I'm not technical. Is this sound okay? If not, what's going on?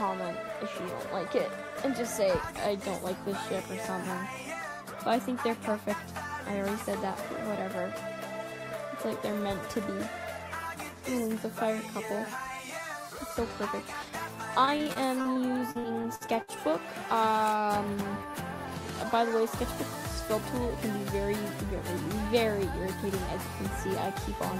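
No. From 14.65 to 16.50 s there is repeated packet loss, which gives a choppy, robotic sound. Small pieces of audio went missing in transmission, about a dozen times in under two seconds, each gap 61 ms at most. The system hid each gap by stretching the sound just before it, so about a fifth of that stretch is patched-in filler rather than the real sound. That repeated patching creates the choppy quality.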